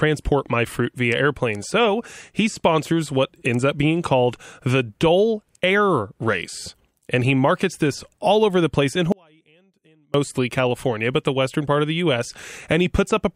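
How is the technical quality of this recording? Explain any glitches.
The recording has one clear glitch: an audio dropout to a faint residue. It starts at 9.12 s, just after "over the place in", and lasts until 10.14 s, about one second. The speech cuts out abruptly rather than fading. Only a faint trace of sound remains, roughly 35 dB below the normal level. It then returns just as suddenly. The cause is likely a brief loss of the wanted signal while the path after the break stayed live.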